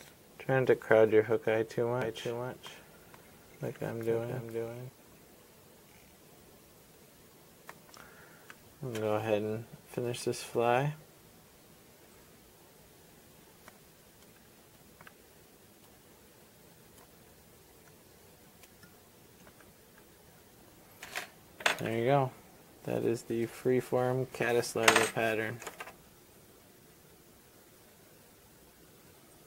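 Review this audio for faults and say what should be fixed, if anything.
From 2.02 to 4.90 s there's a doubled audio track: a second copy about half a second behind, about 5 dB quieter, likely from a second capture path or a misaligned edit. Check routing and the edit timeline so only one copy reaches the mix.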